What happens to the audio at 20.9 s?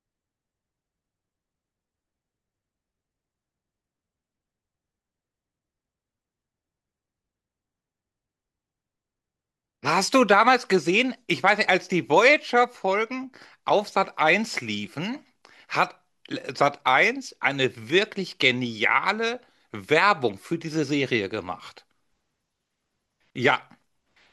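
At 20.89 s the speech drops into a block of digital silence about 2.7 ms long, which fits a 128-sample buffer left unfilled. The abrupt cut and return produce a single tick.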